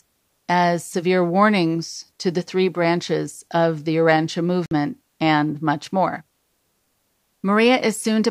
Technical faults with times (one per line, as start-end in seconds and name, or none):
4.66-4.71 Bluetooth stall